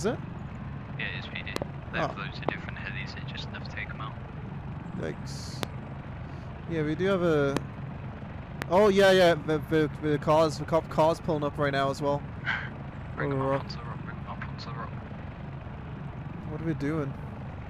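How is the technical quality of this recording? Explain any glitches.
The recording is marred by loud pops: a double pop at 1.56–1.64 s, then single pops at 2.49–2.51 s, 5.63–5.65 s, 7.57–7.59 s and 8.62–8.64 s. Each peaks about 20 dB above the sound (about 25 dB at 5.63 s), which carries on underneath. These sharp thumps are likely voltage pulses from a plug, switch, static discharge or driver glitch, shaped by the downstream circuitry.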